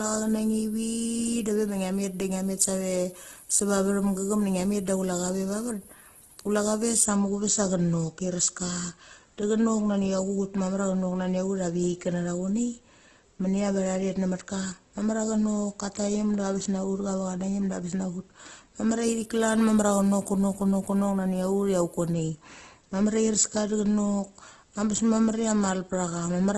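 Throughout the speech, the sound is rough and grainy, with tones breaking into noise, and nothing is heard above 12.2 kHz. This is likely Opus compression in CELT mode at around 12 kbps: bands short of bits are filled with folded or noise content, giving heavy grit rather than swirl.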